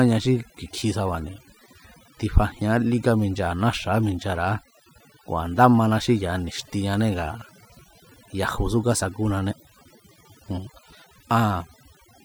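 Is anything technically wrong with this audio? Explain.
Yes. Throughout the speech there is overdone noise removal. A noise reducer set too aggressively cuts individual frequency bands whenever their level sits near its noise estimate, so the softer parts of the voice are removed along with the noise. The gaps drop and break up into twinkling specks. Unlike a noise gate, which mutes everything at once, this works band by band, leaving those scattered tonal specks.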